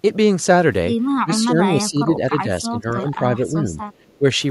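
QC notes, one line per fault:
1.21–1.31 s, 1.47–2.49 s, 2.7–3.18 s, 3.39–3.74 s and 4.19–4.24 s: speech suppressed in double talk. The speech dips in level, by about 25 dB in the first brief dip and about 10 dB or less in the others. This is likely an echo canceller treating overlapping talk as loudspeaker echo and turning it down.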